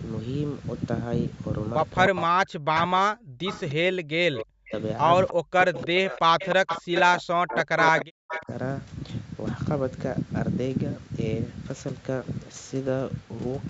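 Speech suppressed in double talk, from 2.09 to 4.74 s: the speech dips by as much as about 40 dB for roughly two seconds in total. The likely cause is an echo canceller that, with both sides talking at once, could not tell its own talker from the loudspeaker echo and turned everything down. Starting inside that span, echo leak appears at 2.76 to 2.80 s, 3.46 to 3.74 s and then 4.38 to 8.44 s. A copy of the sound trails 306 ms behind, about 10 to 15 dB below the speech, in short scraps and then a long stretch. This is likely loudspeaker pickup that the far end's canceller failed to remove and sent back. From 5.32 to 8.51 s the suppression returns, with gaps of around 40 dB spread over roughly three seconds. The band tops out at 8 kHz, which matches the call's microphone processing and Opus coding.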